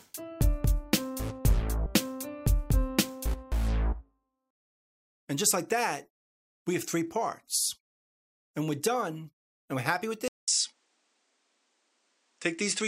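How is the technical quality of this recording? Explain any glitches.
At 10.28 s the recording has a glitch. The sound drops out for about 200 ms and then continues to the end of the clip at 12.88 s with a changed character. Nothing is present above 10 kHz, so the top end is duller. A faint new background noise sits well below the signal, and the overall level stays about the same. This pattern points to the input being switched to a poorer device, likely another microphone or a headset call profile. Its narrower bandwidth and different noise floor replace the original capture chain, and the brief silence marks the handover between devices.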